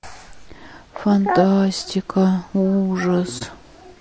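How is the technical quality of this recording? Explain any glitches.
Technical quality is limited by audible coding damage throughout and one brief dropout near the end.

Low-delay AAC compression: across the whole clip the speech sounds rough and grainy, with noise filling the spaces between harmonics. The likely cause is AAC-ELD, whose short frames resolve pitch harmonics poorly. The damage is plainly audible, which fits a low bitrate of around 32 kbps.

AAC frame loss with muting: from 3.38 to 3.42 s the sound fades out and back in, leaving a brief dip. The missing spectrum was zeroed, and the overlapping windows smear the edges of the roughly 30 ms gap, consistent with one lost frame.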